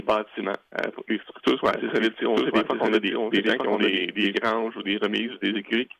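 From 1.68 s to 4.36 s a doubled audio track appears: a second, full-band copy of the sound runs about a second behind the original, roughly 5 dB quieter, with no decay or room colour. It switches on and off abruptly, likely from a slower capture path recording the same feed twice. On a spectrogram the patterns repeat, shifted right by about a second; the waveform shows overlapping, echo-like envelopes with hard edges.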